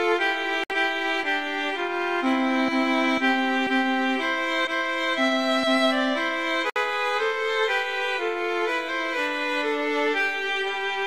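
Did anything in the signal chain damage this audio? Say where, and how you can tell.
Yes. The damage happens at the codec stage, where separately encoded pieces were joined. There is a gap at a join of encoded pieces at 0.64 to 0.70 s and again at 6.70 to 6.76 s. Each is a gap of about 60 ms with smeared edges. The sound resumes exactly where it stopped. The 6.0 s spacing suggests 6 s segments. Each encoder run added start-up delay and end padding, and nobody trimmed them before joining.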